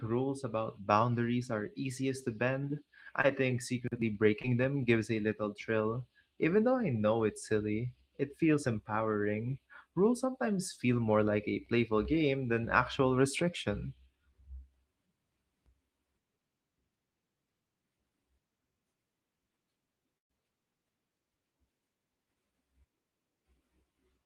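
At 3.21 s and again at 4.42 s there's short concealed packet loss. Each time about 20 ms of the speech didn't reach the decoder in time, and the receiver patched the hole by extending the last bit of sound for roughly 20 ms before blending back into the real signal. You hear it as a tiny smear or wobble, over in a blink, and a quick consonant can get swallowed.

Then at 20.18 s, running to about 20.31 s, there's a burst of packet loss. Roughly 120 ms went missing in one go, far too much to hide. The receiver carried the last sound forward and faded it as the gap dragged on, so it becomes a held buzz or hiss that quickly dies away, with about 110 ms sitting at near silence. The speech then picks up past the missing stretch, so that chunk is simply gone.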